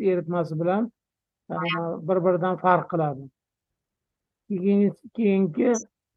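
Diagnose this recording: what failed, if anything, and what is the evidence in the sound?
Corrupt frame decoded at 1.56–1.78 s and 5.75–5.84 s: at the codec stage, bit-damaged frames were decoded anyway, throwing energy into wrong frequencies as brief, fairly loud glitches.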